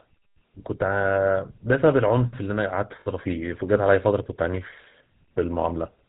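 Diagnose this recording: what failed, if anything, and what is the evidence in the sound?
Throughout the speech there is a plainly audible buzzy, gravelly roughness, and nothing is heard above 4 kHz. That points to the codec stage, specifically the GSM full-rate codec, which fits a 13 kbps stream. The codec rebuilds the voice from a vocal-tract model excited by evenly spaced pulses, keeping only every third excitation sample. That coarse excitation gives the grainy texture, and the codec's band limit removes everything over 4 kHz.

From 3.01 to 3.07 s, a 60 ms stretch, the sound freezes into a rough, metallic ring instead of continuing naturally. This is lost GSM frames, a failure on the network or transmission side, and the length fits about three 20 ms frames. With no good data arriving, the decoder repeated the parameters of the last good frame. The result is that held, ringing sound until normal frames resumed.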